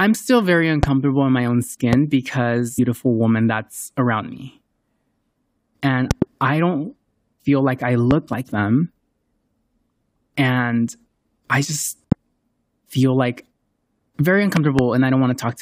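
At 0.83 s and again at 1.93 s a loud pop cuts through the speech, each a single sharp thump peaking roughly 15 dB above the voice, with the speech continuing underneath. The cause is likely a brief voltage spike, from a switch, static or a driver glitch, entering the signal chain. On the waveform each pop is a tall, narrow spike towering over the speech envelope. On a spectrogram it is a thin vertical stripe spanning the whole frequency range.

At 2.78 s a stream segment is skipped. A chunk of the programme likely failed to load and playback resumed at the next segment, so the speech lurches forward abruptly, marked by a small blip. The waveform shows a hard discontinuity where the envelope changes without any transition. On the spectrogram the harmonic traces break off at a sharp vertical seam and resume at different pitches and positions.

The pops then recur. A double pop falls between 6.11 and 6.24 s, a single one comes at 8.11 s and another at 12.12 s, and a final double pop spans 14.57 to 14.81 s. 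Each double shows as two closely spaced spikes and paired broadband stripes, all at roughly the same 15 dB level.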